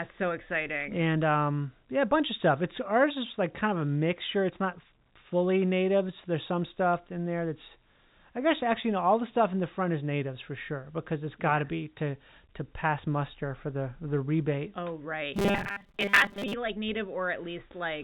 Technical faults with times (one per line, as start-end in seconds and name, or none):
15.34-16.53 robotic sound from repeated short buffers